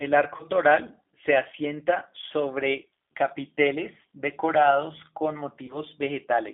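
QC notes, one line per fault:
Throughout: G.729 codec. The line is G.729A at 8 kbit/s, rebuilding speech from a vocal tract filter, a pitch predictor and sparse pulses, with the band held to about 200 Hz to 3.7 kHz. Damage is plainly audible: dull, slightly rough, synthetic-sounding speech with no top end.
0.36 to 0.43 s: VoIP packet loss concealed by the speech codec. A single lost packet, about 30 ms of audio, made the decoder extrapolate from its last pitch and filter with falling gain, so the sound smears into a fading buzzy tone or coloured noise and stays weak until just before "toral se asienta sobre".
5.66 to 5.79 s: VoIP packet loss concealed by the speech codec. One packet, 30 ms, lost right after "sobre capiteles decorados con"; the decoder stretches its last frame into a dwindling buzzy tone or coloured noise, and because each frame builds on the previous one the distortion lingers past the gap itself.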